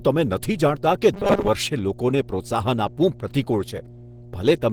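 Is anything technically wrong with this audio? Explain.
Yes, three problems are audible.

Mains hum runs through the whole clip: a steady 60 Hz tone sitting about 20 dB below the speech, with some low harmonics above it. This is power-line energy coupled into the signal path, typically through a ground loop or the field of a nearby transformer. Because it never varies with the speech, it forms a constant low drone under everything and is most exposed in the gaps between phrases.

Throughout, the speech also has a coarse, grainy, hoarse texture, and harmonics turn rough and noisy. This is likely Opus compression at a low bitrate, around 16 kbps, running in its hybrid mode. That mode codes the low band with the speech model and the upper bands with the music coder, which fills short-of-bits bands with noise, giving this hoarse, smeared quality. The bandwidth itself stays wide, with content reaching up to about 20.3 kHz.

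From 1.14 to 1.49 s, just before "વર્ષે લોકોને પ્રોત્સાહન આપવું", the speech collapses into a rigid metallic buzz at 200 Hz that only loosely tracks the syllables. The cause is likely repeated short buffers. When new audio arrives too late, playback loops the last fragment, and a 200 Hz buzz fits a 5 ms fragment. Most of the real audio in that stretch is skipped and replaced by these repeats.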